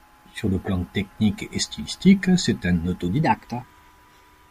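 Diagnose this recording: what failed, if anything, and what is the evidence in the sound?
From 3.23 s to the end, right after "et stylistique c'est un", the speech runs 1.17 times fast and sits about three semitones higher. That's a section at the wrong speed, likely an edit or playback stage clocking this stretch wrong.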